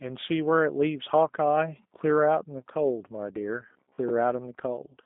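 G.729 codec coding runs throughout the speech. The line passes roughly 200 Hz to 3.7 kHz. Each 10 ms frame is rebuilt from a vocal tract filter, a pitch predictor and a few pulses, giving a plainly rough, synthetic edge that fits an 8 kbit/s VoIP link.

Robotic sound from repeated short buffers appears from 3.73 to 4.13 s, a rigid metallic buzz near 66.8 Hz that still loosely tracks the speech. It is likely caused by audio arriving too late, so a short chunk of about 15 ms is replayed while roughly half the real signal is skipped.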